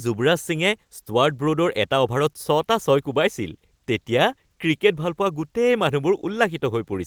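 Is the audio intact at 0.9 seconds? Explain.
Yes, at 0.9 seconds the audio is intact, with no fault heard at that moment.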